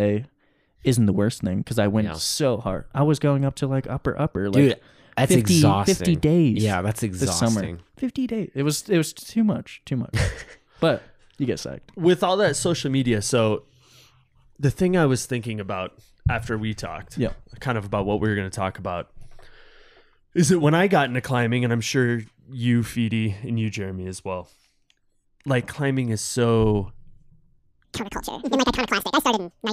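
Audio read two samples at a time (double speed) from 27.85 s to the end at 29.72 s: the reader treats each pair of samples as one frame, so the speech runs twice as fast and an octave higher.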